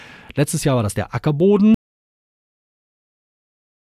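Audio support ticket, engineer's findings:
Audio dropout to silence from 1.74 s, lasting to the end of the clip. The input path was likely lost through a disconnected device, a failed link or an unintended mute, while the recorder kept writing silence. The speech cuts off mid-flow right after "war das der", and everything after that is silence with no room tone or noise floor. Content past the cut is not recoverable from this file, so a re-capture is required.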